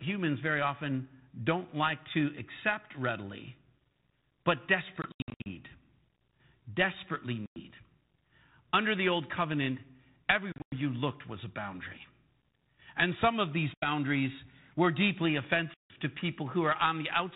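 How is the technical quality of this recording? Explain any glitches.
The recording has five bursts of packet loss on an ADPCM call, heard over a telephone-band channel that cuts off at 4 kHz and fits 32 kbit/s G.726 ADPCM.

The losses fall at 5.02–5.47 s (about 280 ms missing, scattered over 440 ms, longest gap 80 ms), 7.46–7.60 s (100 ms), 10.52–10.75 s (160 ms, longest gap 100 ms), 13.74–13.87 s (80 ms) and 15.74–15.96 s (160 ms). Each is a hard-edged silent hole. Afterwards the decoder's predictor and step size no longer match the sender's, so the speech returns with a click, a wrong level or distortion that settles within tens of milliseconds. That recovery after the hole is what separates this from a simple clean dropout.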